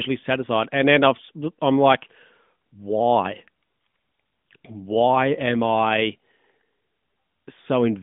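No technical faults can be heard in the speech, which carries the expected sound of the AMR narrowband mobile codec at 12.2 kbps, with a band of roughly 150 Hz to 3.6 kHz and only light coding character.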